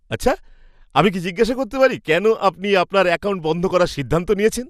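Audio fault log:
throughout MP2 compression: the speech sounds dull and gurgling, with a plainly audible granular roughness as the upper bands flicker in and out. This is likely MPEG Layer II coding starved of bits, at a rate the sound suggests is around 80 kbps, so high sub-bands get switched off and the remaining ones are coarsely quantised.
1.56 s DAB burbling: a brief burst of burbling between "আমি কি জিজ্ঞাসা" and "করতে পারি কেন আপনি". Bit errors on the order of one in a thousand got past the error correction into the MP2 data, and the corrupted samples put short blips of noise into single sub-bands.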